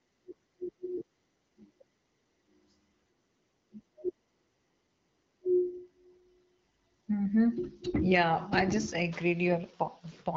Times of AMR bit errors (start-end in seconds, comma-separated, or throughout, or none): 7.84-8.01